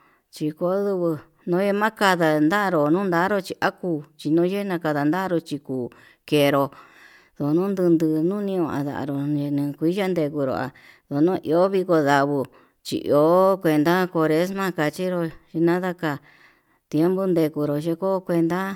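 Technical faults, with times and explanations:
No technical faults turn up anywhere in this speech recording, and its signal holds steady and intact from beginning to end.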